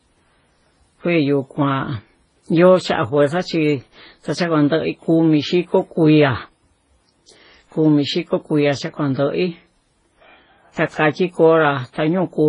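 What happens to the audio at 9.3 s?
At 9.3 s the audio carries the same damage heard throughout the clip: nothing above 10.5 kHz, with two different families of coding artefacts layered together. This is likely transcoding between lossy codecs, where an MP3-style encode at a low rate was re-encoded as Vorbis. The second codec spent its bits reproducing the first codec's artefacts and added its own. A single lossy pass would show only one consistent artefact texture, not this mixture.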